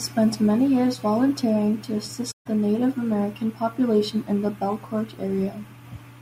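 AAC frame loss with muting from 2.31 to 2.47 s, just after "many years volunteering to": the decoder zeroed the spectrum of the missing frames, so the speech fades out into a soft-edged gap of about 0.15 s, which fits roughly seven lost frames, then fades back in.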